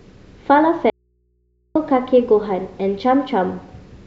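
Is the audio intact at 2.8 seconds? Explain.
Yes, at 2.8 seconds the speech is intact, with no dropout, click, distortion or other fault at that moment.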